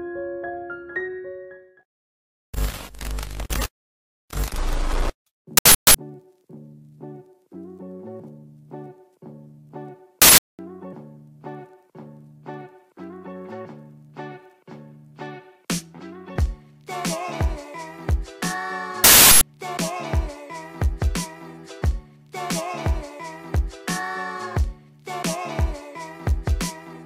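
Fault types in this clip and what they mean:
Uninitialised buffer: a block was played before being written, so leftover memory sounds as three 0.37 s noise bursts, consistent with a 16384-sample buffer.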